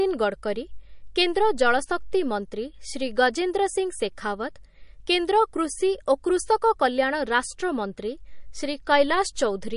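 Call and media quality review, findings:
Watery, swirly speech throughout, plainly audible; s sounds chirp metallically, consonant attacks smeared. Likely MP3 compression, low bitrate, consistent with about 40 kbps. Spectrogram: hard ceiling at 10.6 kHz, empty above; upper bands speckled with holes as weak lines drop in and out frame to frame. Waveform: soft onsets with pre-echo.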